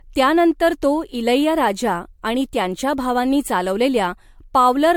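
Throughout the speech, generation loss makes the sound swirly, hollow and smeared, with blurred consonant attacks. The likely cause is repeated MP3 re-encoding, which fits roughly seven passes near 100 kbit/s. A spectrogram shows speckled holes in the upper bands and nothing above 19.9 kHz.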